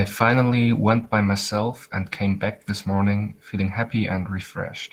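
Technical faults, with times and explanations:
Throughout, Opus voice compression. The speech sounds hoarse and slightly robotic, and the damage is plainly audible. The low band is coded by linear prediction, and a thin transform layer carries the highs, so the top end remains present. The excitation is coded coarsely, which roughens the voice and blurs its texture. This fits a low bitrate of around 16 kbps, with too few bits to describe the signal faithfully.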